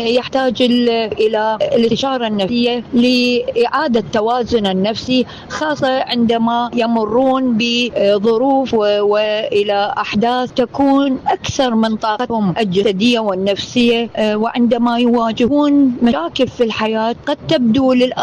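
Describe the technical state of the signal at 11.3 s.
At 11.31–11.48 s a loud pop occurs, two sharp thumps a few dB above the sound, likely from a voltage pulse reaching the signal chain.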